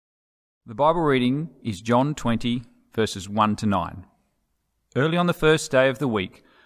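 No dropouts, distortion, noise bursts or other technical faults are audible anywhere in the speech.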